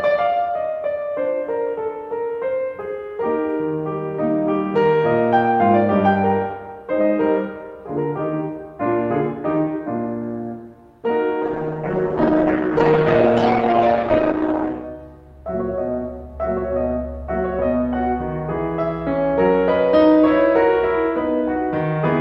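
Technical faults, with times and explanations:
11.45–14.95 s, call bitrate drop: for about 3.4 s the music turns coarse and watery and loses its top end, which fits the encoder being pushed from around 64 kbps down to roughly 11 kbps after the call's bandwidth estimate fell. With so few bits, detail is coded crudely and the highs are discarded. Unlike packet loss, the sound never breaks up or repeats. It stays continuous but degraded until the rate recovers.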